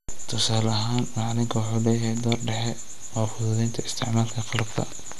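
Throughout the speech, the sound points to MP2 compression, likely at a rate around 80 kbps: too few bits leave upper sub-bands switched off, with nothing above 12.2 kHz, and the remaining bands coarsely quantised, giving a dull, gurgling, granular distortion that flickers audibly.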